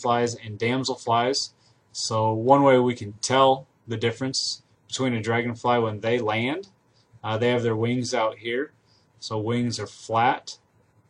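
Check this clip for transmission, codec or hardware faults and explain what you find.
No transmission, codec or hardware faults can be heard anywhere in the recording; the signal stays continuous and stable throughout.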